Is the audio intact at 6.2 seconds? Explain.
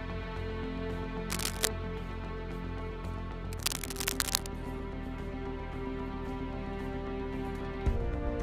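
Yes, the audio at 6.2 seconds is intact, with no dropout, click, distortion or other fault at that moment.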